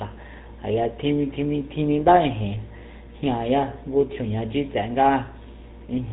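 Throughout the speech, the GSM full-rate codec's damage is plainly audible, a buzzy, gravelly roughness consistent with a 13 kbps stream. A vocal-tract model driven by sparse regular pulses replaces the real excitation. Spectrograms show nothing above 4 kHz, with smeared, grainy harmonics beneath.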